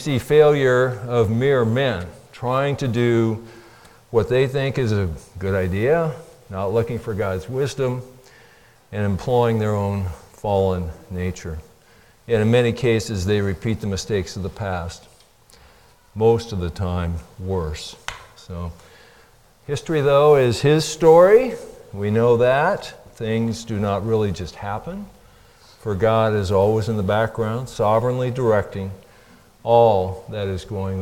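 Nothing technically wrong can be heard in this audio. No fault shows up at any point in the recording.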